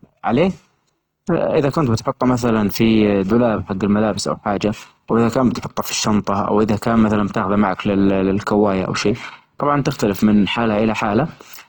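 Throughout, the speech sounds grainy and rough, with noise-filled upper bands reaching about 20.2 kHz, likely from Opus compression in music mode at a low rate around 16 kbps.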